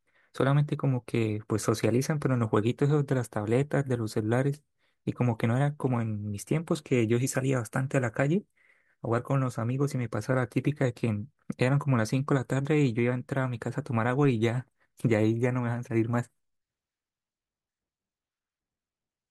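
At 14.24 s there is a DC step. The waveform's zero line suddenly shifts by about -39 dBFS, then drains away through a 5 Hz high-pass. It is heard as a single low thump or click beneath the speech, which carries on unchanged.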